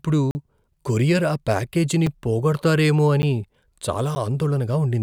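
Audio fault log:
0.31 to 4.16 s, block of digital silence: gaps at 0.31 to 0.35 s (40 ms, just before "కొరియర్ ఆ ప్యాకేజీని పోగొడతారేమో"), 2.07 s (5 ms), 3.22 s (10 ms) and 4.15 s (10 ms). The sound cuts out abruptly and returns with no fade; the longer gap sounds like a brief hole, the shorter ones like ticks.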